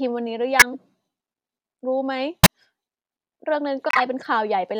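Speech with two kinds of bitstream damage. At 0.59–0.75 s and 2.43–2.47 s, corrupt frames were decoded anyway: misread gains and codes throw loud energy, peaking around -5 dBFS, into the wrong frequencies, heard as chirps, squeaks, blips or noise bursts lasting a few frames each. These add sound rather than removing it, which tells them apart from dropouts. At 3.89–4.02 s, a corrupt frame run was muted: the decoder rejected the damaged data and the player inserted silence, which fits about six frames. The hole begins abruptly, and timing after it is kept.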